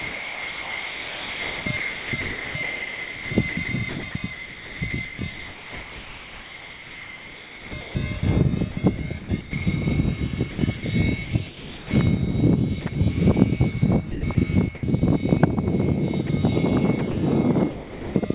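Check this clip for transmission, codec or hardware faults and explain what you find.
Two kinds of fault are audible, both tied to voice activity detection on the sending side.

Sound chopped by the voice detector occurs at 0.0 to 9.53 s, 10.51 to 11.91 s, 12.81 to 12.95 s, 14.11 to 14.83 s and 16.99 to 17.17 s. The first stretch is the worst. About 6.9 s of it is replaced. Later stretches lose 640, 60, 220 and 80 ms. The likely cause is a detector that kept switching transmission on and off. Quiet parts were swapped for comfort noise. The sound turns choppy.

Sound dropped by the voice detector occurs at 16.27 s and from 17.71 to 18.15 s. The first dropout lasts 20 ms. The second replaces 440 ms and loses about 370 ms of real sound. Here the detector likely judged quiet sound to be background and stopped sending. The receiver filled the gap with steady comfort noise. The sound gives way to that noise and returns when sending resumes.

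All of this passed through a call path with a band limit at 4 kHz, which fits G.711 mu-law at 64 kbps.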